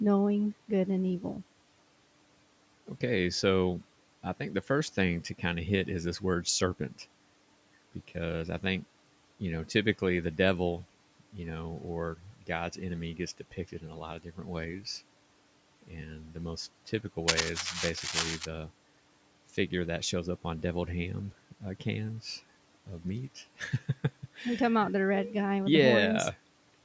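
At 1.2 to 1.41 s, just after "good and", the noise suppressor cuts speech it took for background, dipping it by about 9 dB. The same speech cut by the noise suppressor recurs at 12.17 to 12.49 s after "the devil you know" (about 12 dB), at 13.38 to 13.97 s between "enemy gets" and "lot of" (about 11 dB), and at 14.19 to 14.48 s (about 12 dB). Each time, roughly a tenth to a fifth of a second of low-level sound is pulled down with the room noise, so those stretches sound faint and swallowed.

From 17.28 to 18.46 s, dense, irregular crackle sits over the audio at about the same level as the signal itself. It sounds like scratching and rustling. This is cable scratch noise, most likely a worn cable or connector being moved so that its contact resistance fluctuates rapidly and injects bursts of noise for just over a second.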